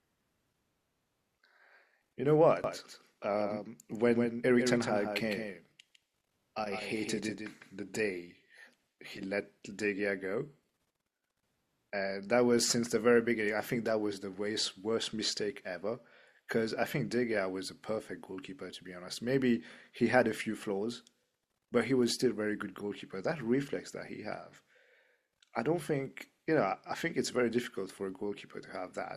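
From 2.64 s to 7.96 s a doubled audio track brings a full-band copy trailing the speech by around 150 ms, about 5 dB quieter, dry and abruptly switched, likely from a slower capture path. The waveform shows each syllable shadowed by a smaller offset repeat.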